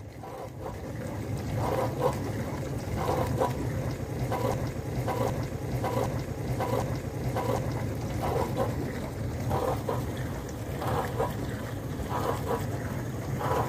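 At 4.54 s the audio locks into a broken-record loop: a 0.76 s fragment repeats exactly, back to back, four times until 7.75 s, likely from a stalled player or stream resending its last buffer. A spectrogram shows identical blocks tiled side by side, and the audio for that span is missing.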